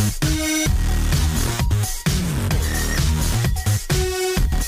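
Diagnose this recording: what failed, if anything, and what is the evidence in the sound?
Three abrupt jumps in the sound at 0.66, 2.38 and 3.65 s, each skipping roughly 40, 20 and 10 ms with no gap, point to the driver or buffer stage, likely a dropped buffer (overrun). The waveform shows a discontinuous splice; the spectrogram, a thin vertical broadband line.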